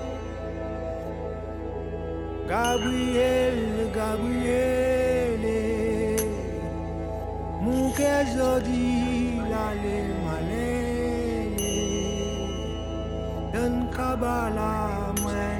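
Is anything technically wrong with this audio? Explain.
No, nothing technically wrong can be heard in this audio. There is no fault to describe or explain.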